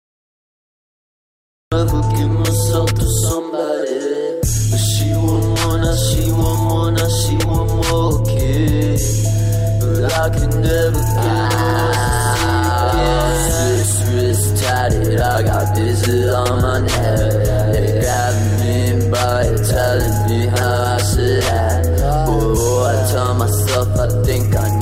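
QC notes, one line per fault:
0.00–1.72 s, cut-off start. The clip opens on digital silence with no room tone or noise floor. At 1.72 s the sound appears abruptly, already partway through. There is no natural attack and no fade-in. Whatever came before that point was never captured. The recording or stream began late, so the first moment of audio is a hard edge where a sound was already in progress.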